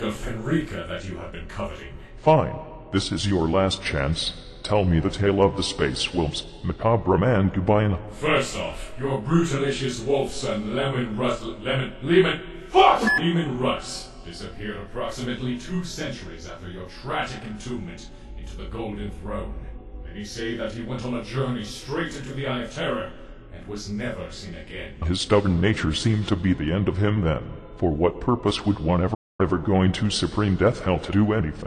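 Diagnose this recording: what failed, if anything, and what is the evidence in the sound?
A playback stall at 29.14 to 29.41 s: the sound stops mid-flow and the output stays silent for about a quarter of a second before resuming. The likely cause is the player's buffer running dry or its output thread being blocked, leaving nothing to send until it recovered.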